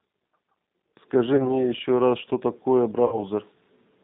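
Throughout the clip the speech passes through a low-bitrate G.729 codec, most likely the G.729A variant at around 8 kbit/s. Each 10 ms frame is rebuilt from a vocal tract filter, a pitch predictor and a handful of pulses, and nothing above 4 kHz survives. The result is muffled, plainly rough and slightly synthetic.

From 1.36 to 1.65 s there is VoIP packet loss concealed by the speech codec. About 30 ms of audio went missing, which fits a single lost packet. The decoder filled the gap by extending its last pitch and filter while stepping the gain down. That stretches the sound into a fading tone or noise, and the speech stays weak or distorted for tens of milliseconds or more after the gap, because each new frame builds on the corrupted state. The same happens from 3.06 to 3.25 s, where about 60 ms was lost, consistent with two packets. The longer gap gives a more drawn-out smear.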